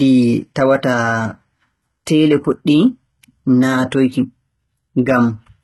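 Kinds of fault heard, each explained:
HE-AAC compression: the speech treble sounds likely rebuilt by spectral band replication, with heavy damage, gritty metallic sibilants and nothing above 11.8 kHz.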